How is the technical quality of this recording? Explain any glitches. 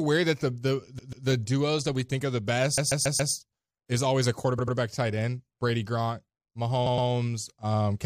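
The speech stutters in four places, where a short stretch plays again in quick succession.

Repeated frames: at 0.98–1.26 s a 139 ms slice sounds three times in a row; at 2.77–3.32 s the same length sounds five times; at 4.58–4.76 s a 93 ms slice and at 6.85–7.08 s a 116 ms slice each sound three times. A run of compressed frames was duplicated, so the decoder replays the same audio, and the recording is lengthened by the replayed time.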